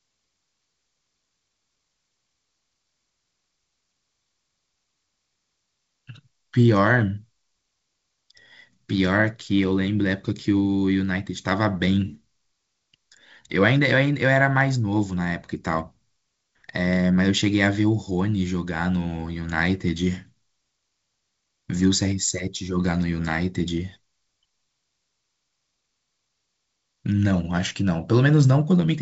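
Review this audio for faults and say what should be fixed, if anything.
Nothing here needs fixing; the speech comes through a G.722 wideband telephone path at 56 kbit/s, with content ending around 7.7 kHz and only light coding texture, as that path would give.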